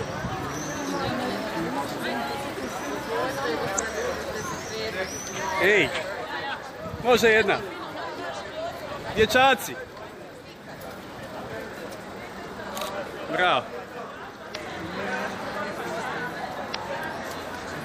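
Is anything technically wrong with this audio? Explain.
Yes: damaged data in a compressed stream, at 3.75–3.80, 14.51–14.56 and 16.71–16.75 s. The decoder misreads corrupt frames and resyncs, giving brief glitches heard as a chirp, squawk, click or short hole, shown as waveform discontinuities.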